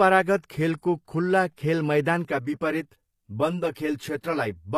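Speech, with plainly audible codec damage throughout: the top end stops at 14.9 kHz, and the treble above the coded band sounds rebuilt rather than original, so sibilants come out gritty and metallic. This is likely HE-AAC compression, with spectral band replication filling the highs, which fits a low bitrate around 24 kbps. From 2.25 s to the end of the clip, channel delay (comb filtering) makes the sound hollow and phasey. One channel runs about 10 ms behind the other, and the mono sum cancels at evenly spaced frequencies, starting around 50 Hz.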